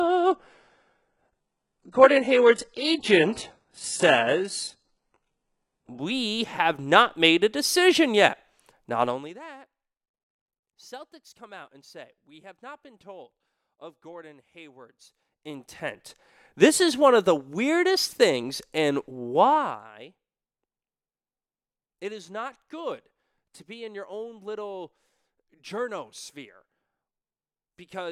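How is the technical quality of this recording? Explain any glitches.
The recording has two kinds of fault: a degraded opening while the stream is at a low bitrate, and two brief bursts of zipper noise during level changes.

From 0.0 to 6.0 s the audio is an adaptive stream starting at a low bitrate. To start playback quickly, the player fetches a cheap version and steps up once it has gauged the connection. The sound is dull and smeared, with synthetic-sounding highs and stronger codec artefacts, which fits an HE-AAC stream of around 12 kbit/s. It then jumps abruptly to a clean rendition consistent with AAC-LC around 96 kbit/s, with no gap, just before "have not made a". On a spectrogram, the first six seconds show a hard ceiling with nothing above 11.1 kHz, and any energy near the top looks patchy and blocky. After the switch, the upper band fills in at once.

Zipper noise appears from 9.04 to 9.4 s and again from 19.48 to 19.92 s, the second burst right after "the weirdest things and". 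Here a gain change was applied in unsmoothed 2 dB jumps, and each jump leaves a tiny discontinuity that clicks. The first burst pulls the level down by roughly 25 dB at about 50 steps per second, which gives a rapid buzzy zip. The second drops it by roughly 15 dB at about 30 steps per second, a slower ticking. On a waveform, the envelope descends as a staircase rather than a ramp. On a spectrogram, each step shows as a faint vertical broadband line.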